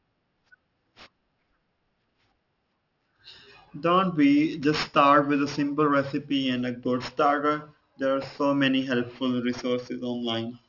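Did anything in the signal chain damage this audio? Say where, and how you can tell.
Yes. The damage happened at sample-rate conversion: the speech was downsampled without an anti-aliasing filter, in a way that points to a drop from 48 kHz to 12 kHz. The result is aliasing throughout the whole clip. Everything above 6 kHz folds back below that line, so sibilants and fricatives come out gritty and metallic, with false tones sitting roughly 20 dB under the speech. The spectrum also runs hard right up to the 6 kHz band edge.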